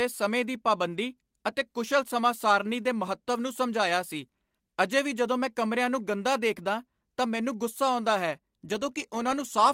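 No technical faults can be heard in this recording.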